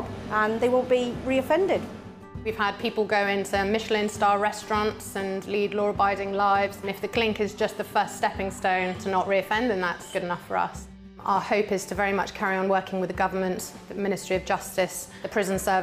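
No technical faults can be heard anywhere here.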